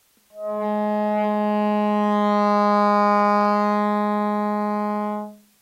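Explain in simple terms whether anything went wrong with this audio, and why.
Yes, one fault runs through the whole clip: low bit depth with dither. The audio was stored with too few levels, which fits roughly 9 bits, and the rounding error was spread into a steady, even hiss that sits audibly under everything, without harsh distortion.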